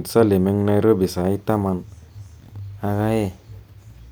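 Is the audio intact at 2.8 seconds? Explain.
No. Sample clock jitter runs from 1.14 to 3.73 s, covering 2.8 s. The converter's timing wanders by roughly a few microseconds, so each sample lands slightly off, giving a hiss about 35 dB below the speech that grows on loud, bright sounds.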